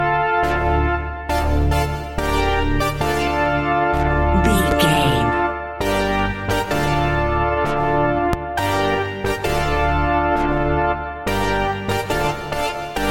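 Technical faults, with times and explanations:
4.71–4.74 s and 8.33–8.36 s, loud pop: a voltage spike, likely from a switch, plug or static discharge, adds a sharp single pop about 15 dB above the sound, which continues underneath.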